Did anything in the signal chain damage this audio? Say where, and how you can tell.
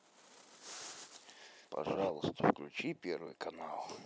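Yes. A doubled audio track runs from the start to 2.1 s. An equally loud, dry copy trails by roughly 150 ms and stops abruptly, unlike decaying echo. It likely comes from a slower second capture path.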